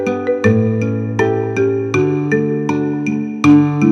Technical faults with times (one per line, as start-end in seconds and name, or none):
0.46-0.48 hard clipping
3.44-3.92 hard clipping